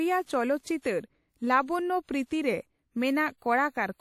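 Speech with plainly audible WMA compression throughout. It sounds ringing and washy, with a hiss that swells and fades with the speech. Nothing reaches above 16.8 kHz. The likely cause is a low-bitrate transform encode, which fits about 48 kbps.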